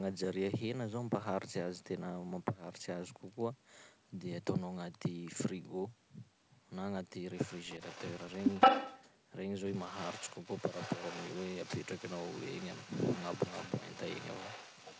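From 7.37 to 9.03 s a second copy of the speech trails the original by 170 ms, about as loud as the speech itself. It returns from 9.74 s to the end, now roughly 15 dB quieter, a faint shadow. This is an echo leak, likely from a far end on a loudspeaker whose echo canceller let its microphone's pickup through and sent it back.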